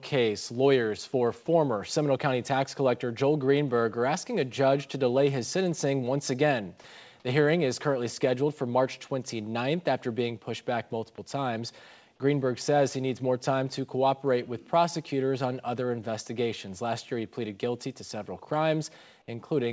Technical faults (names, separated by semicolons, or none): none